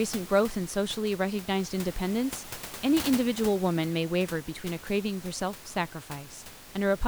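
It's a speech recording with nothing technically wrong, just some background room noise sitting about 15 dB under the voice.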